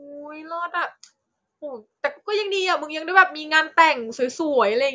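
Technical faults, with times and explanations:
No technical faults can be heard in this speech recording. Nothing in the signal stands out as a defect at any point.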